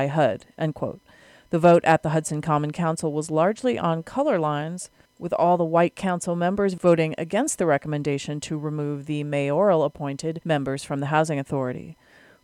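A brief crackle and roughening on the loudest peaks is heard from 1.65 to 1.95 s, and again, shorter and fainter, from 6.88 to 6.93 s. This is hard clipping: the signal briefly exceeds what a stage in the chain can pass, by about 2 dB in the first passage and about 1 dB in the second, so the peaks are sliced flat. Those flattened tops generate high harmonics, which come through as the gritty edge on each overload.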